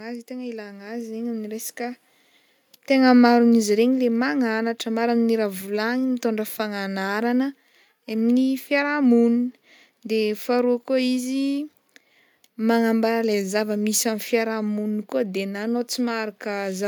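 Automatic gain rising from 0.27 to 2.07 s: the gain control judged the speech too quiet and raised its level by about 9 dB, so voice and background swell together. Automatic gain falling from 3.11 to 5.39 s: the control judged the input too loud, or its background too strong, and eased the gain down by about 4 dB, so the speech starts loud and then sinks along with its background.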